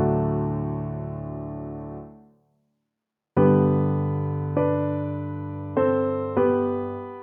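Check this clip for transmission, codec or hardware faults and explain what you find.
Checking this clip, I find nothing to explain.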